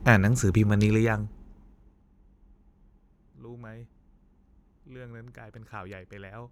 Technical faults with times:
0.82-2.04 zipper noise

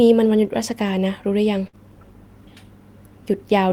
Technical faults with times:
1.67-1.75 burst of packet loss

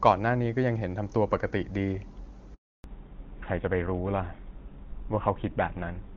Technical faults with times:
2.54-2.84 handover gap
2.84-6.17 fallback to narrowband

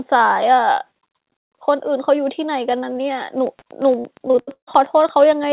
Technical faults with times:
2.72-2.97 short concealed packet loss
3.47-5.52 train of clicks
3.59-3.64 short concealed packet loss
4.00-4.69 repeated packet loss (robotic sound)

